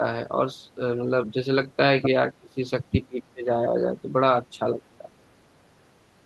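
Speech clip, likely hit by speech suppressed in double talk: the echo canceller mistook overlapping talk for echo and turned the talker down. A slight dip at 0.75 to 0.8 s, then deep gouges, around 30 dB and 25 dB, cut out pieces at 2.38 to 2.71 s and 3.07 to 3.49 s.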